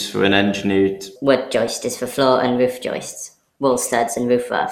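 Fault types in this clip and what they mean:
generation loss: The speech sounds swirly, smeared and hollow throughout, with blurred attacks and nothing above 16.7 kHz, which fits MP2 at around 96 kbit/s. Unlike a single low-bitrate encode, the damage is too heavy for that rate, likely from re-encoding about four times.
section at the wrong speed: From 1.16 s, right after "for an engineered", to the end, the speech runs 1.3 times fast and sits about five semitones high, likely from playback on the wrong clock. Unlike a pitch shift, tempo and pitch rise together.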